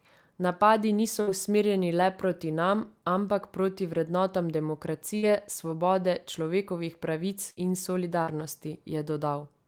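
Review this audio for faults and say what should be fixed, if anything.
Bursts of packet loss at 1.21–1.30, 5.17–5.25, 7.50–7.59 and 8.22–8.30 s: each time, about 60 ms of speech never arrived, and the receiver stretched the last sound over roughly 52 to 58 ms while fading it, so a brief held buzz or dying hiss precedes a jump forward. A larger jitter buffer and forward error correction would prevent it.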